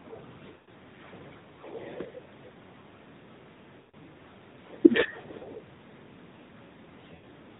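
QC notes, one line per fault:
0.56–0.70 s, 3.80–3.95 s, 5.38–5.44 s, 7.14–7.25 s, lost AMR speech frames: radio errors corrupted short runs of frames in this AMR narrowband call. The decoder filled each gap by repeating the last good pitch and vocal-tract settings at falling gain. The sound therefore smears into a drawn-out, fading tone for roughly 0.1 to 0.15 s at 0.56, 3.80 and 7.14 s, with a briefer dip at 5.38 s, then returns weak and rough for a moment.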